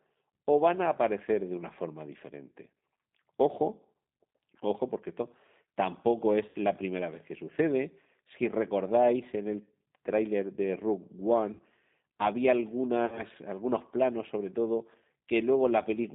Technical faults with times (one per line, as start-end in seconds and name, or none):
0.00-16.14 G.729 codec
6.49-6.56 VoIP packet loss concealed by the speech codec
11.53-11.62 VoIP packet loss concealed by the speech codec
13.06-13.22 VoIP packet loss concealed by the speech codec